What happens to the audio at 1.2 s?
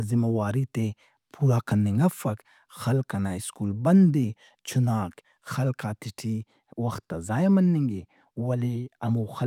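Nothing goes wrong at 1.2 s; the speech carries straight through that moment with no dropout, glitch or other audible fault.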